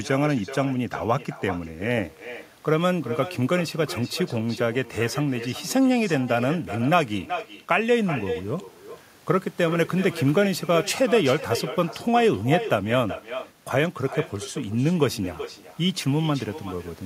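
Throughout the speech, an echo with no canceller trails every phrase: a quieter, thinner copy arrives roughly 0.4 s later, about 12 dB down. On a spectrogram each syllable's energy pattern repeats faintly to its right; the waveform shows smaller ghost bursts following each main one.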